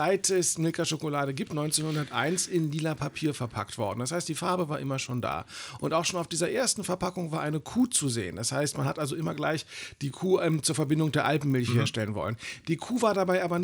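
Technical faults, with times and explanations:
Throughout, resampler restarted on every block: 20 ms blocks converted separately leave edge errors, a 50 Hz buzz that stops with the signal, unlike mains hum.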